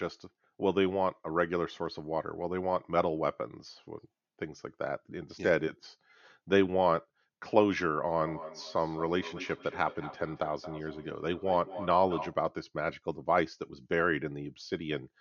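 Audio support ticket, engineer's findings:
Feedback echo between two devices, 8.19–12.41 s. Speech recurs roughly every 200 ms, peaking about 13 dB below direct level. Mic re-captures the other device's playback, which the local echo canceller doesn't cover.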